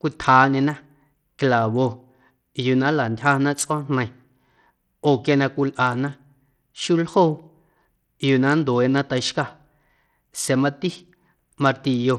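The speech was most likely carried over a Bluetooth link using SBC compression with a small bit budget, one that fits a low rate near 80 kbps. From start to finish, the codec damage is plainly audible. With too few bits to share across its frequency bands, the encoder starves the weak upper bands and quantises the rest coarsely. The treble thins out and flickers, and a gritty grain with aliasing rides on the speech.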